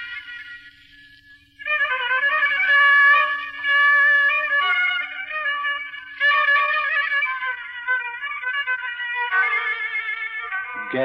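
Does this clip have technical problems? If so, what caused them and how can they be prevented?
No, nothing in this clip stood out as a technical problem on listening, so there is nothing here that needs preventing.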